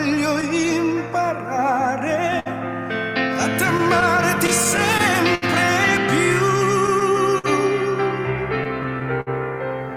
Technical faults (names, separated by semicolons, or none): clock drift between sender and receiver; scattered short gaps; repeated timing corrections; short stall from a late packet; repeated stalls (stutter)